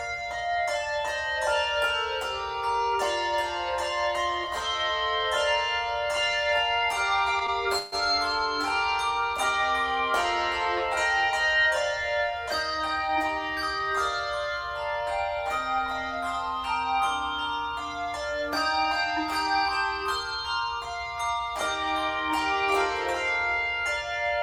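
A short call recording with one hiccup: at about 7.78 s the audio stalls until 7.95 s, a call audio freeze. For roughly 140 ms the last bit of sound is stretched into a fading buzz or hiss rather than dropping to silence, and then the audio picks up exactly where it left off, so nothing is lost, but everything after it lands about 140 ms late. The likely cause is packets held up in transit long enough to drain the jitter buffer.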